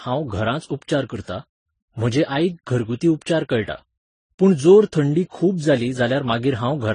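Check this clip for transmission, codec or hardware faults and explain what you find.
One fault runs through the whole speech clip. Throughout, the sound has a hard ceiling at 10 kHz and swirly, smeared artefacts of more than one kind, which points to transcoding between lossy codecs, likely a low-bitrate chain ending in MP3. Each encoding pass re-encodes the earlier damage and adds its own, and the lowest cut-off remains. A spectrogram shows an abrupt empty band above 10 kHz and blotchy, patchy high frequencies.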